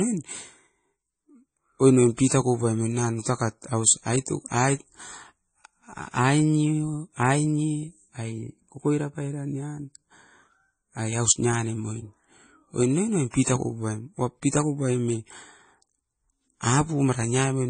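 Speech runs the whole length with nothing above about 9.1 kHz, and the texture is doubly damaged. Two different sets of codec artefacts are heard together, as if each pass added its own artefacts on top of the last. That stacking is what sets it apart from a single low-bitrate encode. The likely cause is transcoding between lossy codecs, consistent with an MP3 pass followed by AAC-LC, both near 32 kbit/s.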